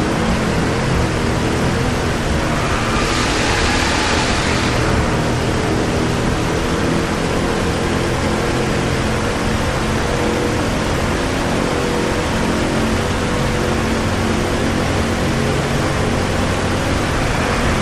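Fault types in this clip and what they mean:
Nothing here stands out as a technical problem, so there's no fault to list for this one.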